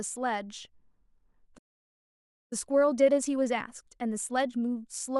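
It's a speech clip, and at 1.57 s it just drops out: a playback stall, with dead silence for a bit over 0.9 s until things pick up again at 2.53 s. That gap doesn't sound like a pause in the talking. The output simply stops mid-flow, which likely means the player ran dry of buffered data or its audio thread got held up and couldn't feed the device. From 2.53 s right through to the end you get time-compressed catch-up. The player is working off the backlog the stall left behind, snipping out short slices and cross-fading over the joins so the pitch stays put. It runs at about 1.15 times normal speed, so the speech sounds a touch rushed but not chipmunky, and it stays that way until the clip ends.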